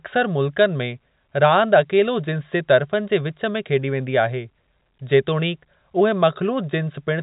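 No technical faults are audible in this speech.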